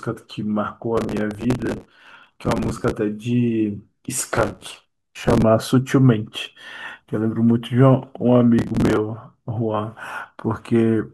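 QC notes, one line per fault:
0.97–2.92 s, 4.36–5.42 s and 8.59–8.97 s, processor overload crackle: many buffers of around 5 ms miss their deadlines and replay stale audio with hard edges. This produces gritty tearing over the speech, seen as dense vertical broadband streaks and jagged waveform discontinuities.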